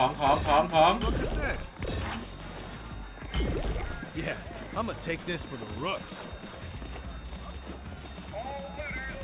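Nothing's wrong with this one: the audio comes through without any technical fault to point to.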